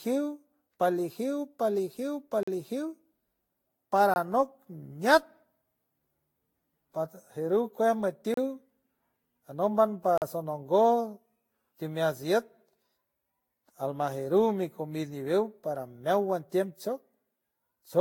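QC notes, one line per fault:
throughout: generation loss. Swirly, hollow speech with blurred attacks and no content above 18.9 kHz, likely from around seven successive Vorbis re-encodes near 65 kbit/s.
2.43 s, 4.14 s, 8.34 s, 10.18 s: block of digital silence. Hard dropouts of 43, 21, 32 and 43 ms, cutting out and back with no fade; the 43 and 21 ms lengths fit unfilled 2048- and 1024-sample output buffers.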